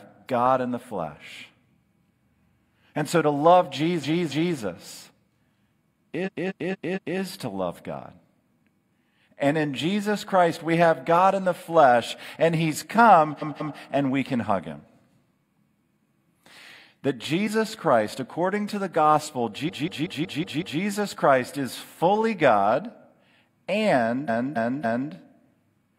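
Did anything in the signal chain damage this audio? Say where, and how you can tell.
Yes. Repeated frames at the codec or storage stage: 0.19 to 0.28 s blocks replay as stutters at 4.0, 6.2, 13.4, 19.6 and 24.2 s. On a spectrogram they look like identical copied slices.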